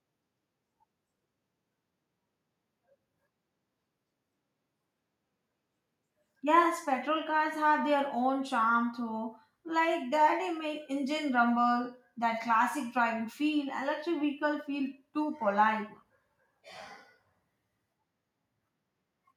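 Nothing stood out as a technical fault on listening to this speech recording.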